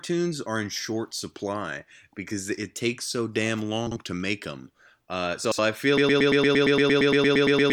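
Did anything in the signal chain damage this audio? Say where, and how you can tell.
Yes. Frames out of order shows up twice. From 3.87 to 3.97 s, between "it takes so damn" and "to make them", two blocks of about 46.4 ms each trade places. From 5.44 to 5.59 s, just before "I feel", two blocks of about 69.7 ms are exchanged. Each stretch has a garbled flutter, while the timing around it stays intact. That points to network or storage delivery reordering adjacent frame groups before the decoder.

A broken-record loop begins at 5.98 s, right after "I feel", and runs to the end of the clip. A 115 ms fragment repeats back to back about fifteen times, identically each pass, and the sound that should follow never arrives. This is likely a stall at the stream or playback stage, where the last buffered fragment keeps being resent in place of new audio.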